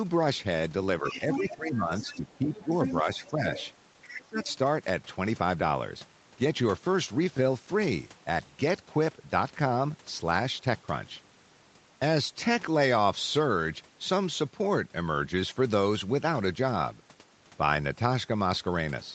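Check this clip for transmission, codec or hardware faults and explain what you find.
Two echo-control faults appear in the first five seconds, both tied to moments when the far end talks over the near-end talker. The audio stops at 8 kHz throughout, which fits a wideband Opus call path running at about 32 kbps.

Speech suppressed in double talk occurs from 1.01 to 2.72 s, 3.03 to 3.45 s and 4.19 to 4.41 s. The near-end voice dips while the other party is speaking, by roughly 10 dB in the first stretch, only slightly (around 5 dB) in the second, and sharply (about 25 dB) in the third, where it nearly drops out. The likely cause is an echo canceller that could not separate local speech from loudspeaker echo and turned the whole signal down.

The other side's voice leaking through can be heard from 1.03 to 1.55 s, 1.99 to 3.70 s and 4.02 to 4.53 s. A second voice sits under the talker, loudest at first (about 5 dB below the speech), then about 10 dB below, then about 15 dB below. 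It likely comes from the far end's playback reaching the microphone and passing through echo cancellation that did not fully remove it. Each leak overlaps one of the suppression dips.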